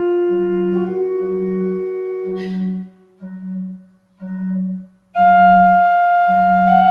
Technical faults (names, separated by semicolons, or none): noise suppressor applied to music or sounds; sound cut by the noise suppressor